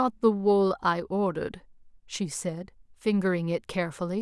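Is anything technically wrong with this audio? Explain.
No, nothing technically wrong turns up anywhere in this speech recording, so there's no problem to point to.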